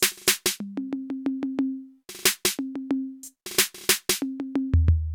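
Nothing stood out on listening to this music clip.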